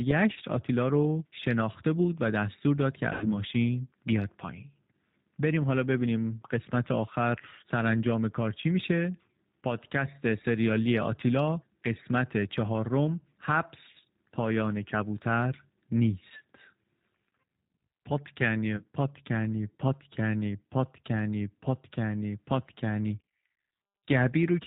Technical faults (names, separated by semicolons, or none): G.729 codec; VoIP packet loss concealed by the speech codec